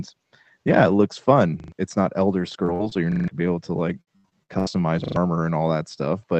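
Just after "yeah it looks", from 1.6 to 1.72 s, a repeated buffer occurs. Fresh audio arrived late, so the device replayed the last 40 ms block three extra times, losing about 100 ms. It stutters with a hard join at each repeat. The waveform shows identical 40 ms segments side by side, and the spectrogram shows vertical seams at each join.

At 2.53 s a lost packet was rebuilt from error correction. The decoder played a low-bitrate copy carried in the following packet, so there is no gap, only a rougher, noisier 20 ms. The same happens at 2.68, 2.79 and 2.91 s. On a spectrogram each appears as a grainy patch, not a hole.

From 2.65 to 2.70 s, leading into "so you're", a short concealed packet loss leaves about 20 ms missing. The receiver extended the preceding sound and blended it back, so the sound briefly smears. Another occurs from 2.89 to 2.93 s.

From 2.74 to 2.81 s a burst of packet loss removes about 60 ms. 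The last sound is held and fades as a buzz or hiss, then the audio jumps ahead. The waveform shows a decaying envelope before a discontinuity.

After "so you're", from 3.12 to 3.28 s, the last 40 ms buffer repeats four extra times and about 150 ms is lost. This is the longest stutter, appearing as a row of copied blocks.

From 4.01 to 4.78 s, repeated packet loss produces robotic sound. Five gaps, the longest 78 ms, are patched by extending earlier audio, covering about 42% of the span. It sounds choppy. The spectrogram shows smeared, flattened stretches alternating with real detail.

From 5.04 to 5.16 s, a 40 ms buffer plays three extra times, losing about 100 ms in another hard-edged stutter.

Throughout, the call path's content stops near 8 kHz, which fits Opus at around 24 kbps.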